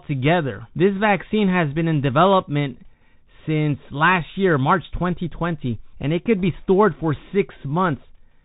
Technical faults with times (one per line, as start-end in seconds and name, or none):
0.00-8.44 Bluetooth CVSD headset codec